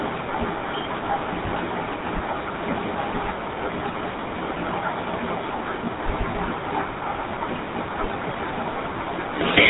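GSM full-rate codec damage runs throughout the speech: pulse-driven vocal-tract modelling, likely near 13 kbps, leaves a buzzy, gravelly roughness, with nothing above 3.8 kHz.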